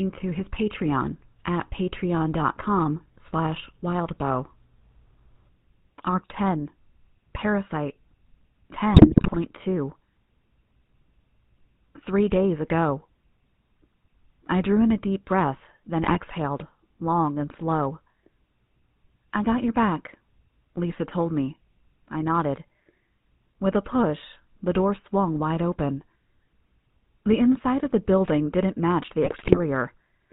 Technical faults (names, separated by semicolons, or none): GSM full-rate codec; GSM bit errors